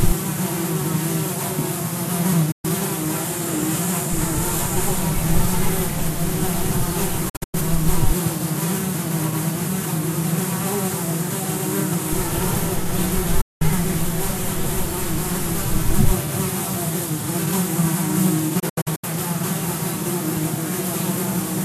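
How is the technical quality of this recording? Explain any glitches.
The recording has four digital broadcast dropouts, where the audio briefly mutes and then comes back. They're at 2.51 s (about 120 ms gone), 7.29 s, 13.41 s (a solid 192 ms hole), and 18.59 s. The receiver lost the signal or got frames that failed their checksum, so it muted with a quick 8 ms fade until clean frames returned. The gap lengths fit frames of roughly 24 ms each. At 7.29 s the 192 ms of loss is split into several short holes over 240 ms. At 18.59 s it's 216 ms scattered across 432 ms, so those two sound choppy rather than like a single clean cut. Whatever was transmitted during the gaps is simply gone.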